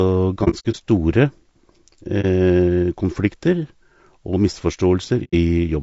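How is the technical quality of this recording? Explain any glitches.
The speech is clearly degraded by coding artefacts throughout, and it has three brief dropouts.

Low-delay AAC compression runs through the whole clip. The voice sounds rough and grainy, with noise filling the gaps between harmonics and a thin, synthetic-sounding top band. The likely cause is AAC-ELD's short frames at a bitrate that fits around 32 kbps. On a spectrogram, the harmonics look smeared and the upper band looks patchy.

AAC frame loss with muting occurs at 0.44–0.76 s, 2.21–2.25 s and 5.24–5.34 s. Lost frames were decoded as silence, and the overlapping windows fade the sound out and back in, so each gap has soft edges. The first event is several short holes spread over 300 ms, the longest around 70 ms. On a waveform, these appear as tapered notches down to near silence.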